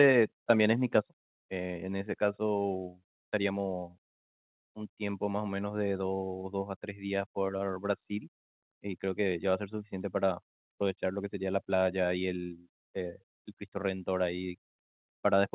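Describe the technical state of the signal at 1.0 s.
A brief harsh crackle on the loudest peak from 0.97 to 0.99 s is microphone overload: input likely running about 1 dB past the converter's limit, flattening a small fraction of the waveform tops. At 1.02 s the whole signal, voice and background together, drops abruptly by about 4 dB, a microphone volume stepped down, likely as the call software reacts to that clipped peak.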